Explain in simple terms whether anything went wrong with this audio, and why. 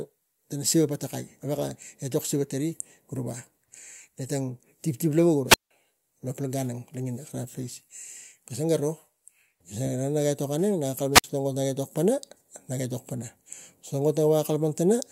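The wireless microphone's radio signal faded, so the receiver muted the output, a wireless microphone squelch dropout. Brief hiss, then silence, at 5.47–5.71 s and 11.12–11.24 s.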